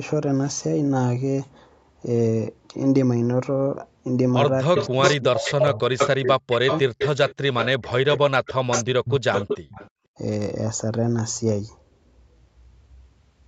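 From 4.63 to 5.02 s the speech dips by as much as about 40 dB for roughly 0.2 s in total. It recurs from 5.39 to 6.86 s (about a second affected) and 7.72 to 9.34 s (about 1.5 s). This is speech suppressed in double talk, likely an echo canceller ducking the near talker while the far side also speaks. It cuts the real voice in pieces rather than adding anything.

Overlapping this, from 4.76 to 7.68 s, a copy of the voice trails about 0.31 s behind at roughly the same level. It returns from 8.46 to 8.84 s and 9.33 to 9.9 s, about 0.33 s late and about 5 dB quieter. This echo leak is likely loudspeaker sound the canceller failed to remove. Unlike suppression, it adds a delayed repeat.

From 9.91 to 10.14 s the room sound itself drops by up to about 40 dB for a moment and then returns. This is background gated by the echo canceller. Here the ambience is cut, not the speech, and no echo is heard. 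The audio is band-limited to 8 kHz throughout, as the call path sets.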